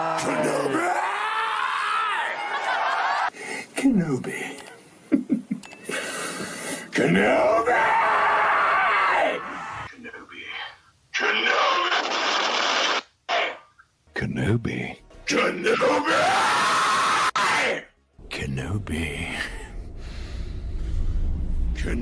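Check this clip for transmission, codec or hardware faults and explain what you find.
No transmission, codec or hardware faults are audible here.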